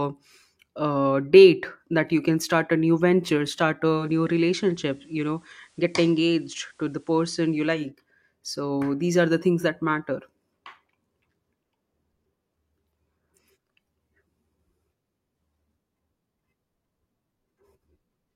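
Just after "a new venture start", at 3.92 s, digital radio blends to analogue FM over about 0.2 s: hiss rises to roughly 35 dB below the signal, and level drops about 2 dB. Unlike a plain codec bandwidth drop, hiss arrives with it, and it cross-fades back at 7.92 s.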